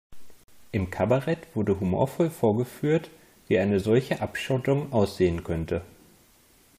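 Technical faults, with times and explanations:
0.44–0.48 s, gap between stream segments: the timestamps of two adjoining segments of the speech stream don't quite meet, leaving a hole of about 47 ms between where one segment ends and the next begins, with segments running about 2 seconds long. The player fills that hole with silence, so the speech drops out abruptly with hard edges on both sides and then resumes, arriving slightly later. Nothing is missing from the speech itself; the gap only adds dead time.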